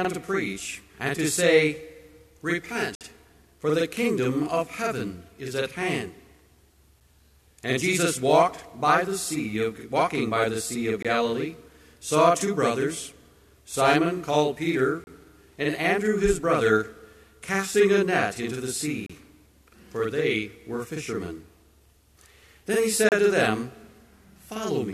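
Throughout the audio, channel delay (doubling) puts a second copy about 46 ms behind, which fits a 2048-sample buffer on one channel. It shows as a smeared, comb-like doubling of every onset on the waveform. Gaps between stream segments cut in silence at 2.95–3.01, 7.00, 11.03–11.05, 15.04–15.07, 19.06–19.10 and 23.09–23.12 s, roughly every 4 s. These are hard-edged vertical blanks on the spectrogram, lasting about 6 to 57 ms.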